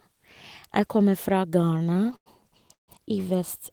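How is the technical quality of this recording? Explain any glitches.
The recording has two network-related glitches in close succession, both gaps inserted into the audio without losing any of it.

Repeated stalls (stutter) run from about 1.59 to 2.28 s, right after "kommer fra". Packets kept arriving slowly, so the jitter buffer emptied twelve times and the last sound was stretched to cover about 205 ms, nearly a third of that stretch. The longest wait was 100 ms. Unlike a single freeze, it is a chain of short hitches that makes the sound drag.

A call audio freeze follows from 2.73 to 2.90 s. It is one held-up stretch of 148 ms, most of it (130 ms) faded to silence before the audio resumes exactly where it stopped. That points to a single delay in packet delivery, likely a brief network hold-up, rather than ongoing late arrivals.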